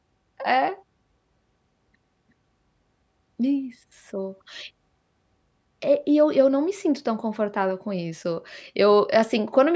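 No technical faults can be heard anywhere in the speech recording; the signal stays continuous and stable throughout.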